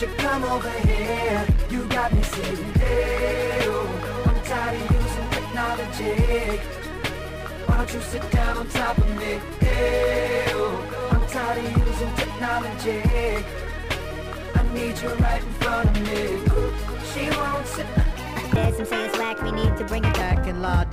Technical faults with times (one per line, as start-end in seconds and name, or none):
18.16-20.21 section at the wrong speed